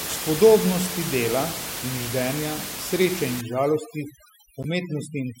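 From 3.41 s, just after "in ždenja sreče in", to the end of the clip, overdone noise removal sets in. A suppressor tuned far too aggressively against the room noise, which sits about 10 dB below the speech, is shutting off individual frequency bands it mistakes for noise, and the quieter parts of the voice go with them. The background drops and breaks up into twinkling specks.

Between 4.63 and 4.66 s, a corrupt frame decoded adds a short burst. A single compressed frame arrived with damaged bits and the decoder played it anyway, putting energy at the wrong frequencies for that frame. The result is a brief chirp-like blip peaking around -20 dBFS.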